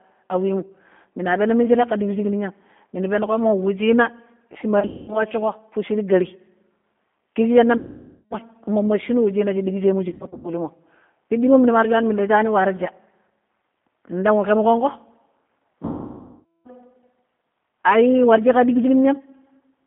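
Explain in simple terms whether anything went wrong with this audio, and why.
Two problems are audible. The whole recording has passed through the G.729 codec, a compact phone-call format that rebuilds speech from a simplified model of the voice. Everything above about 3.5 kHz and below 200 Hz is gone, so the speech sounds thin, rough and slightly synthetic.

The second problem is VoIP packet loss concealed by the speech codec, at 4.80–5.24 s, 7.77–8.35 s, 10.08–10.50 s and 15.85–16.70 s. Chunks of audio went missing in transit, and the decoder filled the gaps by stretching the last sound into a fading buzzy tone or noise. The longest gaps, at 7.77 s and 15.85 s, last over half a second.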